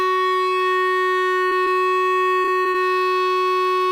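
A music clip with two short concealed packet losses, at 1.49 to 1.53 s and 1.65 to 1.68 s. In each, about 20 ms of audio failed to arrive in time, and the receiver bridged the hole by extending the preceding sound before blending back, leaving a brief smear or wobble in the music. From 2.42 to 2.76 s there is repeated packet loss with a robotic sound: four dropouts in quick succession, the longest about 30 ms, each patched by continuing the last sound. The concealment fills roughly a quarter of that stretch, so the music turns choppy with fragments missing.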